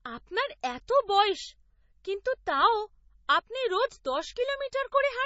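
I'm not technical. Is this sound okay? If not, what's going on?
No. The whole clip sounds dull and muffled, with a watery, swirling quality in the speech and a metallic edge on the hissy s sounds. The likely cause is heavy MP3 compression, which saves space by throwing away detail it judges less important. Here the encoder removed everything above about 7.6 kHz, which takes away the crisp top end, and quiet details keep flickering in and out, which causes the swirl.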